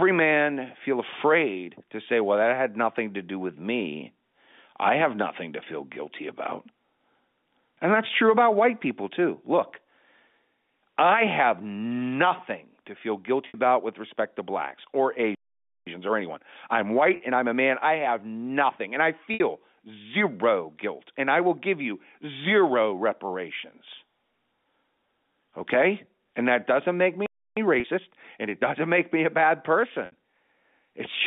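Packet loss with pitch repetition first appears at 13.48 s. About 60 ms of audio went missing, and the receiver bridged the hole by repeating the last pitch period. The sound briefly holds on a slightly buzzy tone before it resumes.

A playback stall follows at 15.35 s, with the output dropping to silence for about 0.52 s mid-flow, likely because the player ran short of data or its thread was blocked.

Time-compressed catch-up then runs from 15.87 to 18.87 s at 1.15 times speed. Small slices are cut out and cross-faded to work off the backlog, so the audio hurries along at unchanged pitch. Inside that stretch, at 17.16 s, a 40 ms pitch-repetition gap adds a short buzzy hold, and another 60 ms gap follows at 19.34 s.

A second stall silences the output at 27.26 s for about 0.31 s. Catch-up runs again from 27.57 to 28.79 s, this time faster at 1.25 times speed, and a 40 ms pitch-repetition gap falls within it at 27.8 s. 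The last 60 ms loss comes at 30.06 s.

All of this is carried through G.711 telephone coding, which keeps the sound within a narrow band of roughly 200 Hz to 3.6 kHz.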